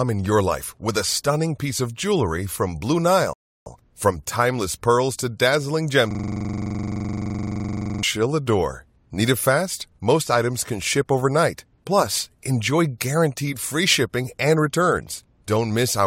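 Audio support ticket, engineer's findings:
Rebuffering stall, 3.33–3.66 s: speech drops to silence for 0.33 s, then resumes at the exact point it stopped. Player buffer underrun on download. Unlike a dropout, no audio is lost; only time is added.

System hang loop, 6.11–8.03 s: one 42.67 ms slice repeats as a steady 23.4 Hz buzz, which fits a 2048-sample ring buffer. The host or driver froze while the hardware kept cycling. Unlike a stall, sound never stops; the same audio repeats.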